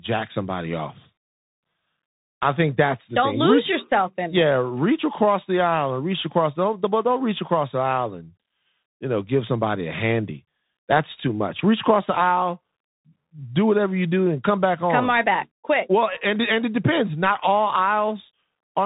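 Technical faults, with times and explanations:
Throughout, Bluetooth CVSD headset codec: the link sends one bit per sample at 64 kHz with an adapting step, so nothing above 4 kHz survives, loud high sounds outrun the step and distort, s sounds turn scratchy, and a granular hiss sits under the speech.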